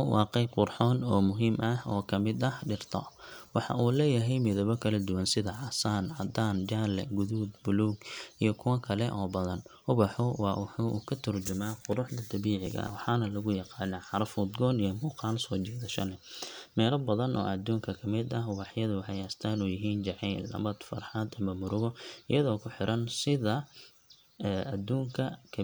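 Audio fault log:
12.66–12.95 s, processor overload crackle: for about 0.3 s the speech breaks into a gritty, tearing crackle as the processor misses roughly ten buffer deadlines. The audio for each missed deadline is skipped, so the waveform is chopped into short pieces with hard edges, at a spacing that fits buffers of around 10 ms. On a spectrogram each cut shows as a thin vertical broadband line, forming a dense cluster that ends when the load passes.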